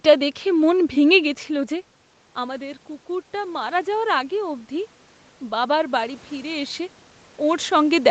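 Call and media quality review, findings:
Automatic gain rising, 2.35 to 6.87 s, right after "মন ভেঙে গেছিল যে". Speech level at the mic drops about 13 dB, and the call's AGC slowly pulls gain up about 7 dB, so voice and room noise swell together over several seconds.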